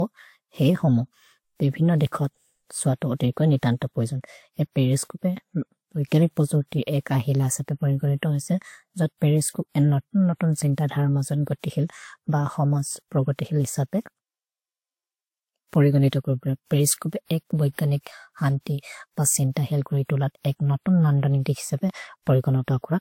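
A speech recording that sounds like it's been through the mill: nothing above about 16.6 kHz for the whole clip, with two flavours of codec smearing stacked on top of each other. That layering points to transcoding between lossy codecs, likely a WMA encode at around 96 kbit/s later squeezed into Vorbis at around 55 kbit/s. The second encoder wastes bits chasing the first one's artefacts, so you get both sets at once, plus that top-end ceiling.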